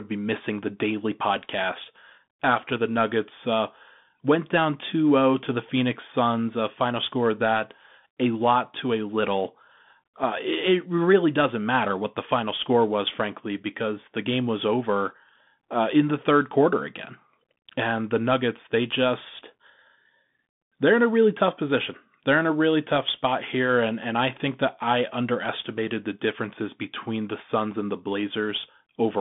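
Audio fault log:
Throughout: Bluetooth CVSD headset codec. The speech sits in a narrow phone-style band, roughly 150 Hz to 3.6 kHz, with nothing above 3.8 kHz. The one-bit delta coding, at a rate which fits 64 kbps, leaves granular hiss underneath, scratchy sibilants and slope-overload distortion on loud bright sounds.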